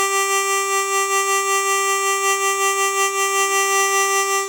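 The music has generation loss all the way through: swirly, hollow and smeared, with soft attacks and nothing above 19.9 kHz. That's likely around seven rounds of MP3 re-encoding at roughly 126 kbit/s.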